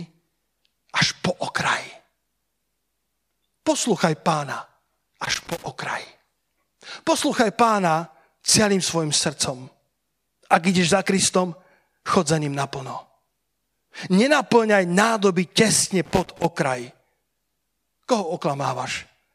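Two bursts of loose connector crackle, from 5.25 to 5.66 s and from 16.05 to 16.57 s just after "nádoby tesne": a dodgy contact chopping the speech into irregular scratchy crackle.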